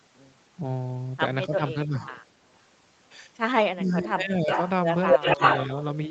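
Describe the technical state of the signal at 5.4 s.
At 5.4 s the signal carries an echo leak, running from 4.91 s to 5.97 s. A delayed copy of the speech, lagging by 281 ms, comes back about 5 dB louder than the direct speech. That is likely because a loudspeaker's sound reached the far microphone and its echo canceller let it through. On a spectrogram, each harmonic stack is repeated a little over a quarter-second later, and the two sets overlap across the 8 kHz band of the call path. On the waveform, the envelopes are smeared into one another.

The same instant is the end of speech suppressed in double talk, from 5.14 s to 5.4 s. With both sides active, the echo canceller likely mistook the near talker for echo and attenuated it in short bursts. These total well under a fifth of a second, and the deepest cut is around 20 dB. The sound briefly drops out or thins. The waveform shows notched, pinched amplitude, and the spectrogram shows brief vertical gaps or faded upper harmonics that recover right at 5.4 s.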